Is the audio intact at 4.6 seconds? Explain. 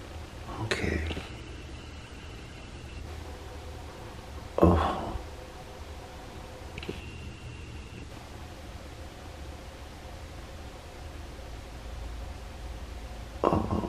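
Yes, at 4.6 seconds the audio plays through cleanly, with no dropout, click, distortion or other audible fault at that moment.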